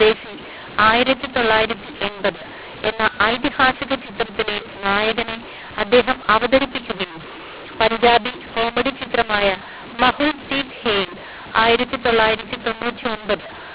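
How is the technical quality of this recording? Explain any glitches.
The quality is poor: the speech is harsh and distorted from start to finish, and pauses are filled with noise rather than silence.

Throughout the clip, mu-law and A-law are mixed up. The telephone audio was encoded with mu-law but decoded as A-law. Because the two logarithmic curves map each 8-bit code to different amplitudes, some samples come out too loud and others too quiet, and near-silent codes land well above zero. The result is a gritty, distorted voice over a constant noise floor. On a waveform, the envelope looks jagged and uneven, and the gaps between phrases never return to a flat line. A spectrogram shows broadband hash smeared across every frame, including the pauses, all of it ending sharply at 4 kHz. That ceiling is simply the telephone band, consistent with 8 kHz G.711 coding.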